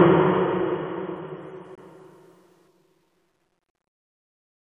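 A corrupt frame muted at 1.75 to 1.81 s: damaged compressed data was rejected and replaced by silence, an abrupt 56 ms gap suggesting about four lost frames.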